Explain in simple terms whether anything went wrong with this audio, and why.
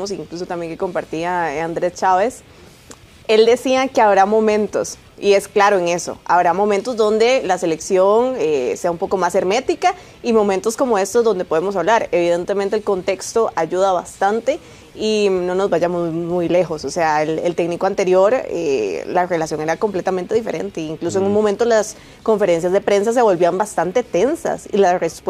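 Nothing went wrong here: no audible fault appears anywhere in the recording.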